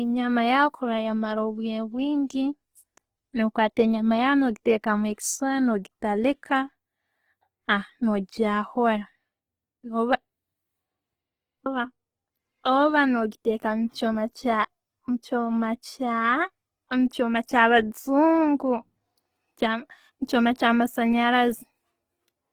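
From start to finish the speech has a rough, grainy texture, with tonal parts breaking into noisy fizz instead of the hollow swirl of MP3. The top stays open, with content reaching about 20.2 kHz. This is likely Opus compression in its full-band music (CELT) mode: short of bits, it keeps each band's energy but refills the detail by folding lower bands or substituting noise. The damage is plainly audible, which fits a low bitrate around 16 kbps.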